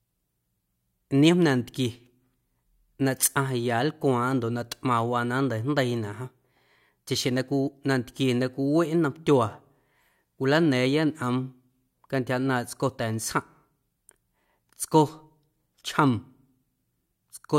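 No technical faults are audible.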